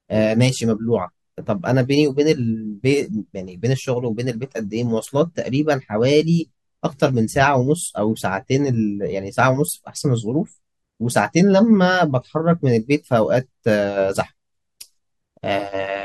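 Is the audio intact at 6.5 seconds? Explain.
No. From 5.98 to 6.98 s the speech has a channel delay (comb filtering) fault. One channel arrives roughly a single sample late, a few hundredths of a millisecond, and summing the two cancels what they share. With a delay that short, the first notch sits up near 20 kHz, so the sound turns dull at the very top. The notch stays fixed rather than sweeping as a flanger would.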